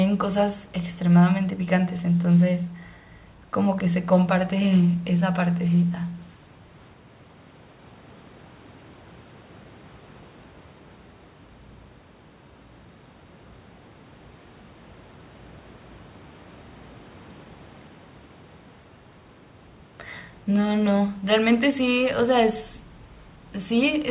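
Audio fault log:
No faults found; the speech comes over a call path with nothing above 4 kHz, which fits a narrowband telephone codec such as G.711.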